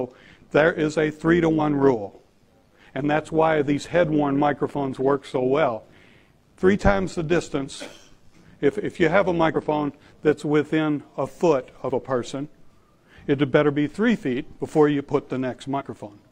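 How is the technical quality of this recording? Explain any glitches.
The recording has three kinds of technical fault: a continuous buzz over the first ten seconds, three brief decoding glitches, and one skip.

From 0 to 10.33 s there is a metallic buzz at around 100 Hz, about 6 dB deep. This is overlap-add ripple: the frames were rejoined with an overlap whose gain does not stay constant, so the level pulses once per frame.

At 1.56 to 1.61 s, 9.51 to 9.56 s and 15.76 to 15.82 s, short chirps or squawks break through. This comes from damaged data in a compressed stream, where the decoder misreads corrupted frames and loses sync until it finds the next valid header.

At 11.91 s there is a sudden skip of around 20 ms, with the audio on either side butted together. The likely cause is audio missing between chunks, lost while the recorder closed one 6-second chunk and opened the next.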